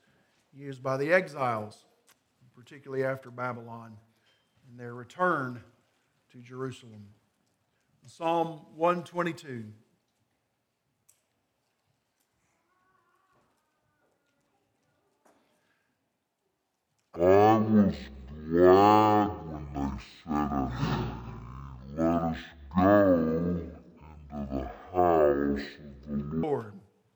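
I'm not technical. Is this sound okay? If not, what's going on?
No. From 17.16 to 26.43 s the sound drags at half speed, a full octave lower: stereo read as mono, where both channels' samples get played one after another as one channel.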